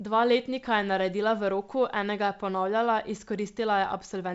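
Speech carried over G.722 wideband telephone coding at 64 kbit/s, with no technical fault to be heard anywhere in the recording.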